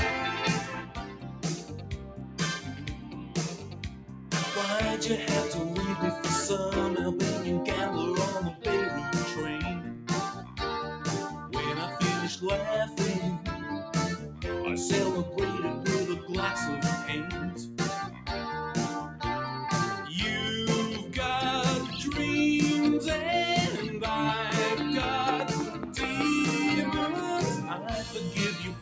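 The sound pumps and thins throughout, with held parts and decaying tails swinging by roughly 10 dB while sharper onsets pass. This is a noise suppressor applied to music or sounds, a speech-oriented suppressor treating steady, non-speech material as noise. Distinct dips where the suppressor cut the sound, of about 6 to 7 dB, fall at 0.82–4.33 s, 9.79–10.59 s, 11.31–11.53 s, 13.38–13.65 s, 14.19–14.43 s, 17.51–18.28 s, 25.7–25.96 s and from 28.65 s to the end, where sustained content sinks and its decay is clipped short. From 24.50 to 26.22 s a train of clicks ticks over the audio, about ten pulses at an uneven pace near 4.7 per second, peaking roughly 15 dB above the signal, likely from electrical interference or a faulty connection or power supply. The bandwidth stops at 8 kHz, consistent with a call's microphone processing.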